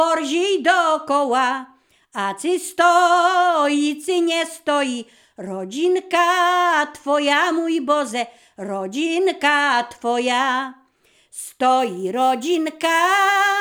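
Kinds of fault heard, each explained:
Sample clock jitter: the converter's clock wanders by a few microseconds, so samples land early or late and steep parts of the waveform are mis-measured. From 11.8 s to the end, a grainy hiss roughly 25 dB below the sound rides on loud, bright passages.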